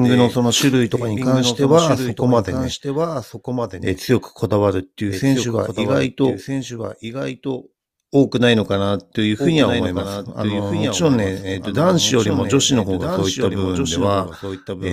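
A speech recording, likely captured twice through a slower second path, producing a doubled audio track throughout: a full-band copy trails about one and a half seconds behind, roughly 5 dB quieter.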